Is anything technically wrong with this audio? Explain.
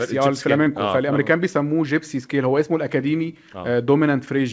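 Yes. There is a short concealed packet loss at about 0.64 to 0.68 s in this speech. Roughly 20 ms of audio never arrived at the decoder in time, so the receiver improvised a 20 ms stand-in by extending the preceding sound, following its pitch if voiced or using shaped noise if not, then crossfaded back into the real signal. It comes across as a brief smear or wobble, and a quick consonant there could drop out. The call path cuts everything above 8 kHz, which fits a G.722 codec.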